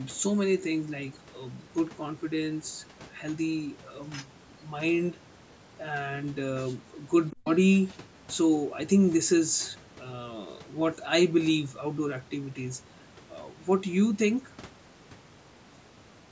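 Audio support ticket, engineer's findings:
Other side's voice leaking through, 7.31 to 7.49 s: faint second voice about 20 dB under the talker, brief. Likely residual loudspeaker echo the echo canceller failed to subtract from the microphone signal, passing into the send path.

Speech suppressed in double talk, 7.40 to 7.46 s, inside the echo window: talker's level collapses by around 40 dB for about 70 ms, a short hole in the speech. Likely echo canceller or suppressor misreading overlapping talk as echo and attenuating everything while both sides were active.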